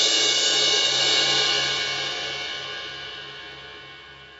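Gain pumping runs throughout, likely from gain set far too high with a fast limiter clamping each loud moment, so the level swings by about 10 dB. From 0.23 s to 4.3 s, clock slip clicks appear as a faint, regular tick about every 0.15 s, likely two unsynchronised clocks drifting roughly 150 ppm apart and dropping or repeating a single sample.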